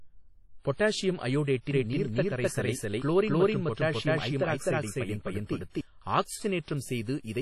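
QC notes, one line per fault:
throughout: WMA compression. Ringing, washy transform-codec sound with hiss that breathes with the speech, and nothing above 14.2 kHz; heavy damage that fits a low bitrate around 32 kbps. Long blocks smear quantisation noise over tens of milliseconds, and weak spectral lines are zeroed, likely from WMA encoding.
1.71–5.81 s: doubled audio track. A full-band second copy of the speech runs about 300 ms behind, at roughly the same level, with no decay or room colour, starting and stopping abruptly. Likely a second capture via a slower path or an out-of-step edit.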